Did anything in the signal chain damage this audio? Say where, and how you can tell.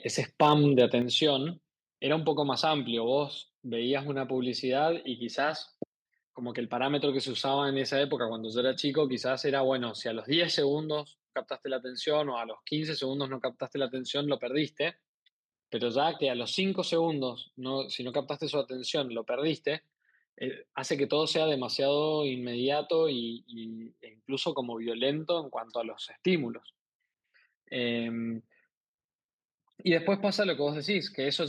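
Yes. Microphone overload at the converter from 0.41 to 0.81 s. Peaks flatten about 2 dB over full scale, adding harsh crackle. Input gain was likely too high.

Microphone volume stepped down in call processing at 1.02 s. Voice and background fall about 5 dB at once, likely the software reacting to that clipping.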